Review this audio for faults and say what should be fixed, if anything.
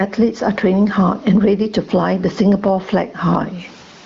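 The level breathes all the way through the speech, with loud and soft passages squeezed toward the same level and a swing of around 20 dB. That is gain pumping, likely from the microphone gain being set far too high so that a fast limiter or compressor keeps clamping down on each peak and releasing in the gaps. To prevent it, lower the input gain so peaks sit comfortably below the limiter threshold, and ease off or disable any fast automatic gain control on that path.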